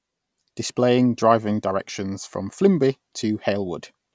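Nothing stood out as a technical fault on listening to this speech recording.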